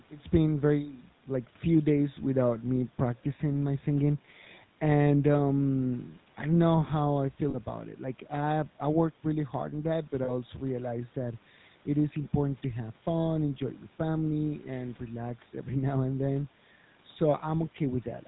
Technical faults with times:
0.00-18.27 GSM full-rate codec
7.50-7.56 lost GSM frames
10.24-10.31 lost GSM frames

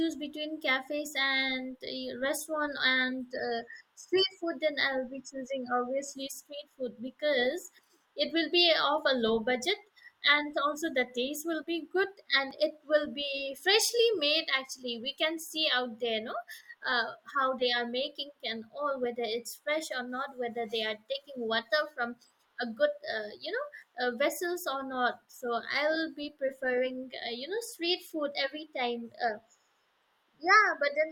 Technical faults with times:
12.51 block of digital silence

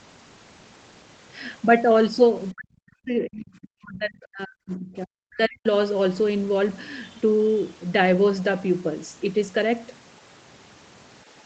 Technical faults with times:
2.53-5.66 speech suppressed in double talk

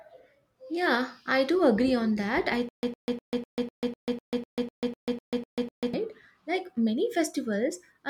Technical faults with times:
2.69-5.94 stutter with silent gaps

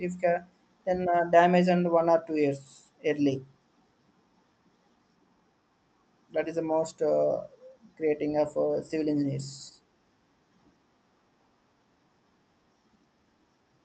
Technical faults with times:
none

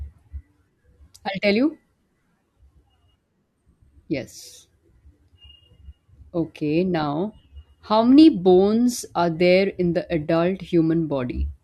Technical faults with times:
none

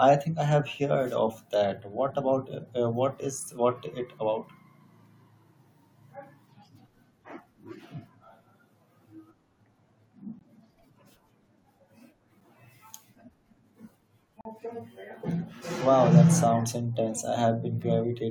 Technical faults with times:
10.39 gap between stream segments
12.41 gap between stream segments
14.41-14.45 gap between stream segments

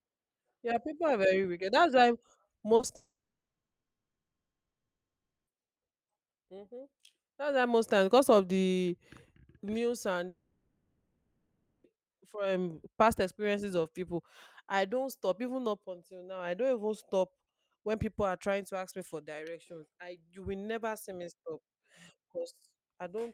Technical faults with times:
2.59-2.91 repeated packet loss (robotic sound)
2.95-5.52 long network dropout
10.28-11.86 long network dropout

